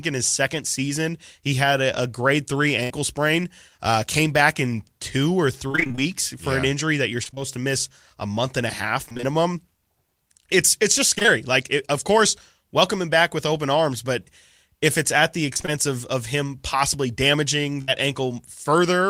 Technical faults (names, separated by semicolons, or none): burst of packet loss; repeated packet loss (robotic sound)